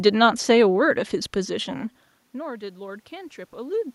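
From 1.48 s to the end, automatic gain rising: the talker moves around 1.5 s and the input drops by about 20 dB, so the gain control slowly climbs by about 5 dB. Unlike a talker simply moving closer, the room noise swells along with the voice.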